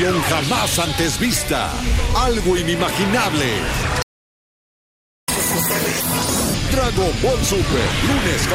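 At 4.02 s the audio just cuts out and stays silent for about 1.26 s, until 5.28 s. That's a playback stall. The player most likely ran dry of buffered data or had its thread held up, so nothing reached the output.

Right after, from 5.28 to 6.54 s, there's a catch-up at higher speed. The player races through its backlog at 2x, so everything sounds sped up and lifted around ten semitones in pitch.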